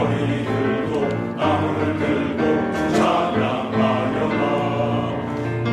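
Nothing in the audio stands out as a technical fault, and it runs its whole course without anything catching the ear.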